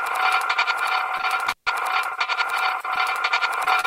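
At 1.17 s a packet arrives late, the jitter buffer runs dry, and the receiver holds the last sound for about 21 ms until the data turns up. A second short stall from a late packet follows straight after, 1.21 to 1.25 s, adding another 20 ms. Nothing is skipped, but the audio falls about 41 ms further behind, and that moment is stretched into a held, faintly buzzy smear before playback resumes where it left off.

From 1.47 to 1.67 s an intermittent contact, a loose plug or cable, breaks the connection for roughly 143 ms of that span. The signal drops out with crackle at the break and the remake, and faint hiss remains while the circuit is open.

Near the end there are two short concealed packet losses: 3.64 to 3.69 s and 3.81 to 3.86 s. In each, 20 ms of audio never reached the decoder in time. The receiver extended the preceding sound to cover the hole, 22 ms and 32 ms of fill respectively, then cross-faded back into the real signal. 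Each one is a brief smear or wobble.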